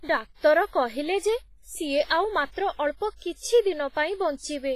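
Speech, with heavy codec damage throughout: a ringing, washy quality, hiss that swells and falls with the signal, and nothing above 15.4 kHz. This is likely WMA compression at a low bitrate near 24 kbps. Its noise smears across tens of milliseconds rather than forming a brief pre-echo.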